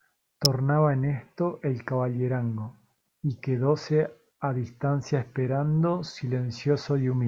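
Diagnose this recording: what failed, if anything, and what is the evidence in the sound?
A single sharp snap sits on top of the speech at 0.45 s, very brief and fairly loud, peaking at about -10 dBFS. It is likely an electrical switching spike: a nearby switch, motor or static discharge arcing once and coupling into the analogue wiring.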